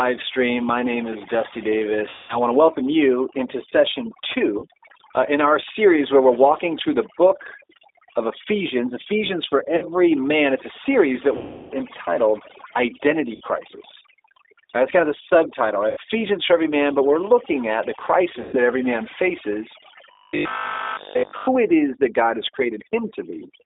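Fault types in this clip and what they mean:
Overdone noise removal: The noise reduction was set far too hard, so whole frequency bands near the noise floor are switched off. Throughout the clip the background drops and breaks up into twinkling specks.
G.729 codec: This narrowband speech codec rebuilds speech from a vocal tract filter and pitch predictor. Here the band runs only from about 300 Hz to 3.7 kHz, consistent with 8 kbit/s, and the speech sounds plainly rough and synthetic throughout.
VoIP packet loss concealed by the speech codec: When packets went missing, the decoder stretched its last pitch and filter and faded them out. Seven gaps, lasting 40 to 340 ms, become buzzy or coloured fading tones. The longest are at 2.09 and 11.37 s.
Robotic sound from repeated short buffers: From 20.11 to 21.47 s the speech turns into a rigid metallic buzz near 50 Hz. It still loosely tracks the speech. 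This is likely caused by the software repeating a 20 ms buffer in place of nearly all the real audio.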